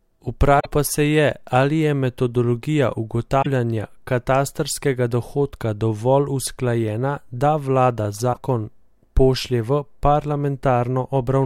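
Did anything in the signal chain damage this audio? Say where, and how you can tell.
Yes. The damage most likely happened at the codec stage, from a broken MP3 bit reservoir. There are three short glitches in the speech: 0.59 to 0.66 s, just before "pa se"; 3.41 to 3.46 s, right after "ali je metodologija"; and 8.32 to 8.37 s, after "dovolj usklajena da vlada". Each is a short splice that lasts about two to three 26.1 ms frames, and the speech jumps forward at that point. The mechanism is that frames were dropped, so the next frame pulled its borrowed reservoir data from the wrong bytes and decoded garbage until it resynchronised.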